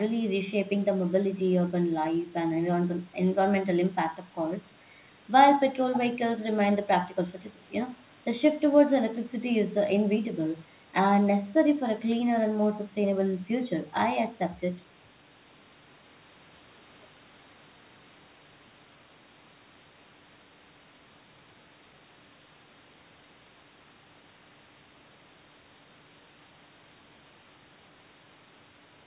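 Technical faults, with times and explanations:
No technical faults turn up anywhere in this speech, which carries the narrow, telephone-like sound of a call path whose codec leaves nothing above 4 kHz.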